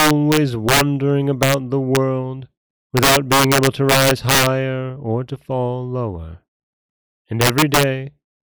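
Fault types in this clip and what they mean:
Integer overflow: the loud speech peaks wrap around to the opposite sign instead of being limited, so you get harsh cracks far nastier than clipping. It's worst near the start and from 2.97 to 4.47 s, pushed about 7 dB over full scale.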